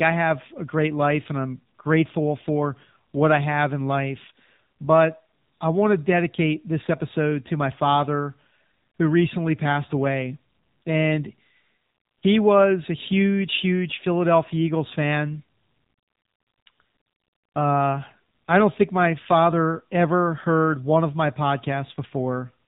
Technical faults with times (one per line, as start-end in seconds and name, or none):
0.00-22.68 AMR narrowband mobile codec